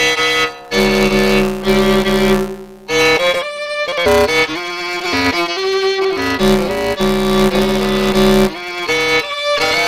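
Throughout, a block size mismatch (truncated) drops each block's tail because one stage writes longer blocks than the next reads, which fits 256-sample reads. That causes a 172 Hz buzz at the block rate, with the audio running 1.88 times fast at near-normal pitch.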